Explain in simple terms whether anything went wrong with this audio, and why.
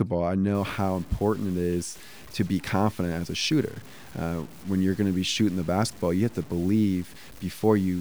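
Yes, something went wrong. From 0.55 s to the end, the speech turns grainy and gritty, and the quiet parts crackle. The likely cause is low bit depth without dither. The sound was cut down to very few levels, roughly 7 bits, and simply chopped.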